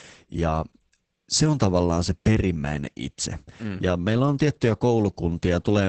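Opus voice compression affects the whole speech clip. Nothing reaches above 8.6 kHz, which fits wideband SILK coding. The excitation is coded coarsely, which points to a rate near 10 kbps. The damage is heavy. Speech sounds muffled, hoarse and slightly robotic.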